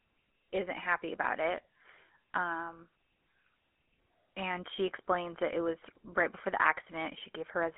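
A speech recording carried throughout by the GSM full-rate codec, whose buzzy, gravelly texture fits a 13 kbps stream. The vocal-tract model driven by coarse pulse excitation roughens the voice, and on a spectrogram energy is confined to roughly 250 Hz to 3.4 kHz, with hard edges above and below. From 5.82 to 5.97 s, GSM bit errors break the sound into squawks and gargling pops. Corrupted filter, pitch and gain values in what points to several damaged frames bend the spectrum. The waveform shows sudden level spikes, and the spectrogram shows smeared, blotchy bursts.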